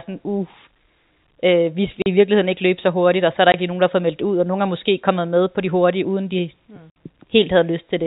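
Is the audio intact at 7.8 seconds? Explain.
Yes, at 7.8 seconds the speech runs on without any break, dropout or added noise, carried through the G.711 telephone coding path with its band limit below 4 kHz.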